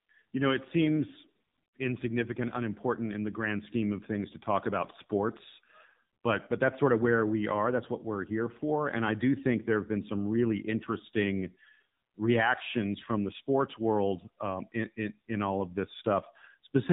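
Speech runs through the AMR narrowband mobile codec for the whole clip. Nothing above 4 kHz survives, so it sounds thin and boxed in. The damage is plainly audible. The tone is buzzy and synthetic, which fits a low AMR-NB rate near 7.4 kbps.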